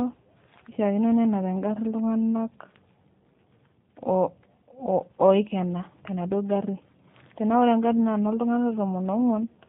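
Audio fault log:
Throughout: G.729 codec, about 8 kbit/s, rebuilding speech from a modelled vocal tract and sparse pulses, so it sounds rough and synthetic; the spectrogram shows nothing above 4 kHz.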